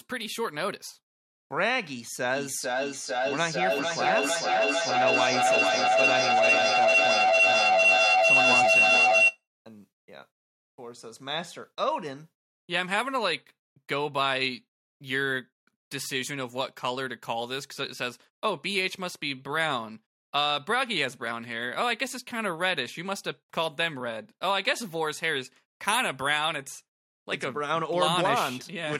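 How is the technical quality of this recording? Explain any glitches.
The recording suffers from feedback howl between 2.35 and 9.44 s. A shrill tone near 3 kHz swells to about 7 dB above the speech and pulses roughly every half second. Sound from another device's loudspeaker re-enters the microphone, gaining level each trip around the loop.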